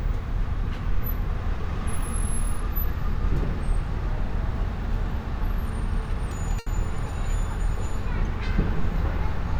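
At about 6.59 s a sound is held a little too long, hanging until 6.68 s with a faint buzzy, slightly dipped texture before the audio carries on from exactly where it stopped. This is a short stall from a late packet. The next packet had not arrived when it was due, so the jitter buffer ran dry and the receiver stretched the last sound to cover roughly 70 ms. Nothing is lost, but everything afterwards plays about 70 ms later.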